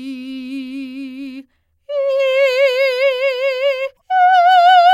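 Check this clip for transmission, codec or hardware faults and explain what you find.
One fault stands out in this music clip: damaged data in a compressed stream, from 3.93 to 4.01 s. For about 80 ms the decoder is fed corrupted bytes, misreads the affected frames, loses frame sync and hunts for the next valid header before playback recovers. The result is a brief chirp, squawk, click or short hole in the music. A spectrogram shows a short vertical disturbance unrelated to the surrounding harmonics, and the waveform shows an abrupt discontinuity.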